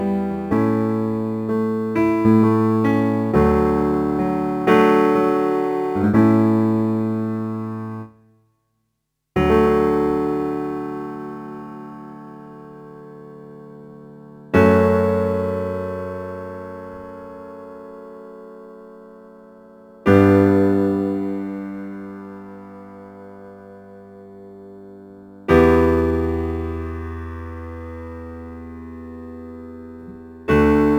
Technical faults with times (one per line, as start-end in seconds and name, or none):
0.00-30.99 crude rate conversion